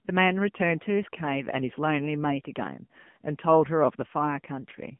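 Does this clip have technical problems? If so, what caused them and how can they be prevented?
Yes. The speech carries AMR narrowband mobile codec damage throughout: it is confined to 150 Hz to 3.4 kHz and sounds plainly buzzy and synthetic, which points to a low mode near 8 kbps rebuilding the sound from sparse pulses. A spectrogram shows a hard ceiling at 3.4 kHz. To prevent it, record locally or over a wideband link rather than through a mobile call.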